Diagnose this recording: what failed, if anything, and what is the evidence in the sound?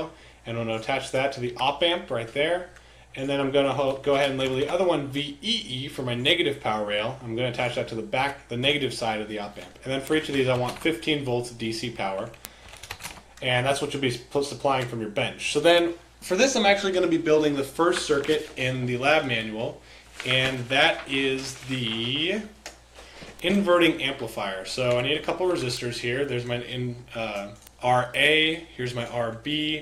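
The digital interconnect between two devices failed to share a clock: the receiving converter ran free instead of locking to the sender, a mismatch of around 50 parts per million. The result is word clock ticks, sharp clicks of uneven strength beginning at 0.55 s and continuing to 29.57 s, roughly every half second, about seventy in all. Each time the two clocks drift a full sample apart, a single sample is dropped or repeated, and that slip is heard as a tick.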